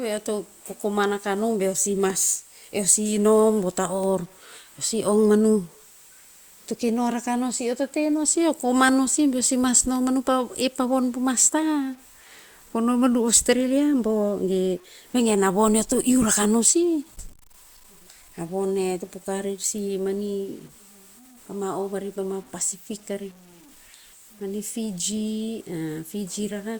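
From start to finish the speech carries a grainy, rasping distortion. It rides on the signal and shifts as the level changes. Quiet syllables and word tails sound gritty, and the softest moments sputter or drop out rather than fading smoothly. The error sits roughly 30 dB below the speech. The cause is likely low bit depth without dither. The signal seems cut down to around 8 bits by truncation, so the rounding error follows the waveform instead of becoming a steady hiss.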